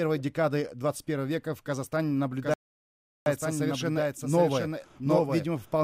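From 2.42 s to the end, the audio has a doubled audio track: a second full-band copy about 5 dB quieter trails roughly 0.7 s behind, likely from a second capture path or a misaligned edit. Unlike an echo or reverb, it has no decay or room colour and begins abruptly. A rebuffering stall cuts the sound to silence from 2.54 s to 3.26 s, adding 724 ms. Playback then resumes exactly where it stopped. Unlike a dropout, nothing is skipped; the silence only adds time.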